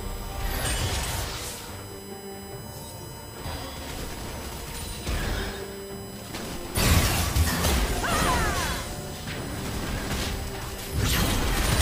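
A fixed-pitch USB whine runs through the whole clip. It sits on a 1 kHz series, strongest at its 18 kHz multiple, about 15 dB below the audio. Bus current drawn in 1 ms frames is leaking in through power or ground.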